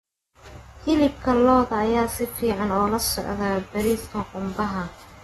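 AAC compression runs throughout: nothing reaches above 12.4 kHz, and the speech sounds dull and smeared, with fizzy warbling on sibilants. An AAC-LC encoder likely starved its spectral lines of bits, which fits a stream around 36 kbps.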